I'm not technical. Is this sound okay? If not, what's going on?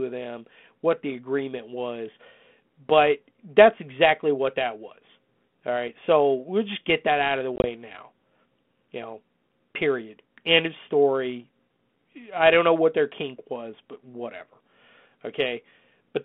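No, there's packet loss on an ADPCM call at 7.56 to 7.67 s: several tiny dropouts chop the speech, and the decoder briefly loses track, so the sound comes back slightly distorted.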